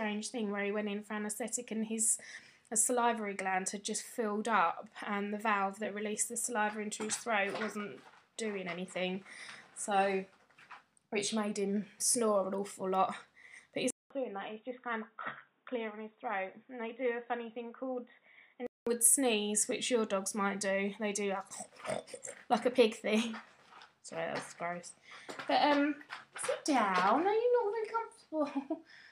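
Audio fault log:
13.90–18.87 s input switched to a poorer device: the input likely changed to a narrower-band device after a 0.2 s gap. With nothing above 3.8 kHz, the sound turns dull and boxy, drops about 5 dB, and gains new noise roughly 45 dB down.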